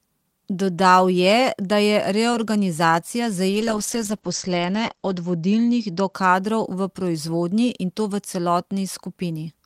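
From 3.55 s to 6.19 s, the speech goes through a call bitrate drop. The connection's bandwidth estimate fell, so the encoder had to spend far fewer bits. The sound points to a fall from around 40 kbps to about 12 kbps. Coding turns coarse and watery. The top end narrows from 20 kHz to 8 kHz, so the speech sounds muffled. The worst stretch lasts about 1.63 s. Then bits return and clarity recovers.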